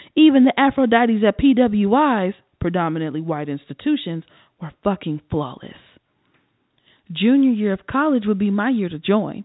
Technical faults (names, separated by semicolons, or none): none